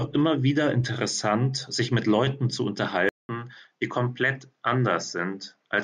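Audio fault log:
3.09–5.84 s: input switched to a poorer device. Recording likely jumped to a lower-grade microphone, so after a 200 ms silence the speech loses everything above 7.7 kHz, sounding duller and a few decibels quieter, with a faint new background noise underneath.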